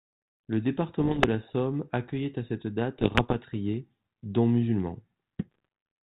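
Pops and short rough, crackling bursts with brief jumps in level break into the speech at 1.00 to 1.26 s, again at 2.98 to 3.35 s, and more lightly at 5.51 to 5.65 s. These are bit errors on an ADPCM link. Around one bit in a hundred arrives flipped in the first two stretches and about half that in the last, and each flip throws off the decoder's step size and prediction, so the damage rings on for a few milliseconds over the narrowband, 32 kbit/s G.726 sound.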